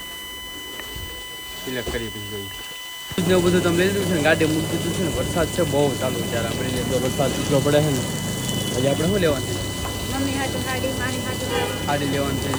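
A steady, fixed-pitch whine sits under the sound for the whole clip, built on 1 kHz with its strongest component at 3 kHz and only around 10 dB below the signal. This is USB whine: current drawn in 1 ms bus frames leaking in through power or ground.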